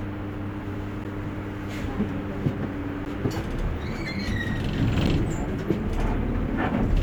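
Periodic USB or driver dropouts occur from 1.04 s to 5.07 s, repeating every 2.0 s, about three times. A recurring stall on the bus or in the driver drops roughly 10 ms of audio each time and fills the gap with silence, heard as evenly spaced ticks.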